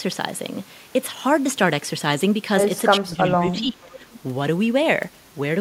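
From 3.0 to 4.01 s, the echo canceller likely could not separate the local talker from loudspeaker echo while both sides spoke at once, and turned both down. This is speech suppressed in double talk. The speech dips across roughly 0.7 s of that stretch, losing about 25 dB at its deepest.

From 3.93 to 4.2 s, an echo leak follows: one side's echo canceller likely left some of its loudspeaker pickup in place and sent it back. A faint copy of the speech, delayed by 440 ms and about 25 dB below the direct signal, trails behind as a brief scrap. It overlaps the tail of the suppressed passage.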